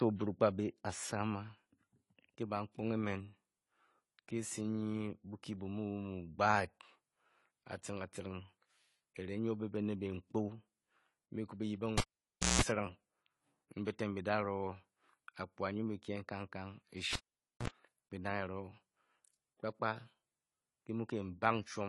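Speech here, with codec damage that's plainly audible all the way through. Nothing gets past about 11.5 kHz, so the top end is missing and the sound comes out dull. That points to AAC compression, likely AAC-LC at a low rate, which fits something around 32 kbps. At that rate the encoder pulls its cut-off down and can't spend enough bits on the spectrum it keeps, so the quantisation damage stays audible for the whole clip.

There are two cable pulled and plugged in events. The first runs from 11.98 to 12.62 s: a pop, then about 0.59 s with the line effectively dead, including roughly 175 ms of 60 Hz mains buzz while only the tip is making contact, then a second pop as the sound comes back. The second runs from 17.13 to 17.68 s and has the same shape: a gap of about 0.50 s and a shorter burst of 60 Hz buzz, around 49 ms.

At 13.85 s there's a pre-echo, a hiss of about 15 ms just ahead of an attack, which also softens that attack. 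It happens because the transform codec spreads its quantisation noise over the whole block. The noise sized for the loud onset ends up filling the quiet moment just before it.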